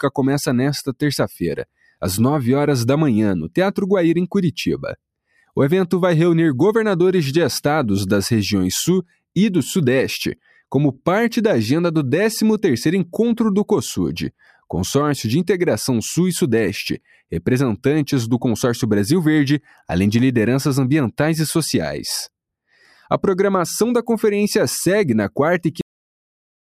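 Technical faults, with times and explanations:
1.65–2.02 s, 10.36–10.61 s, 14.40–14.64 s, 16.99–17.32 s and 22.72–23.08 s: sound cut by the noise suppressor. The suppressor mistook parts of the sound for noise and turned them down harder than their surroundings, by about 21, 8, 10, 17 and 9 dB. Sustained passages briefly sink in level or lose their decays, each dip lasting a fraction of a second.
25.81 s: cut-off end. The last buffers were never written or played out, so the audio stops abruptly in the middle of a sound. It drops straight into digital silence for the final second, with no natural decay or fade.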